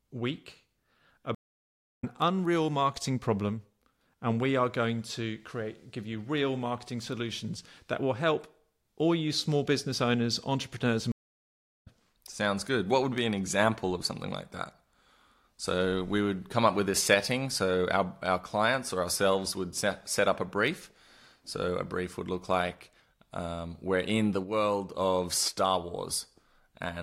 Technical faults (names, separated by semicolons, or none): stream reconnect